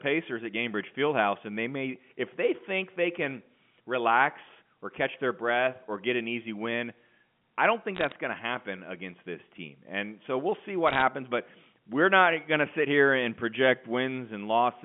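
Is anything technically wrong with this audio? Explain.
Yes. There are bit errors on a digital phone line. They occur in two short bursts, from 7.95 to 8.12 s and from 10.87 to 11.02 s. The speech arrives over a G.711 A-law telephone line. Flipped bits corrupt individual 8-bit samples on their logarithmic scale. When a high bit, or the sign bit of a loud sample, is hit, that sample jumps far from its true value. Each jump is a sharp tick. Clustered together, they form brief crackle on top of the speech. The density suggests an error rate of a few tenths of a percent.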